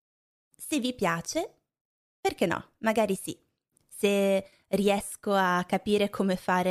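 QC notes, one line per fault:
No audible faults found.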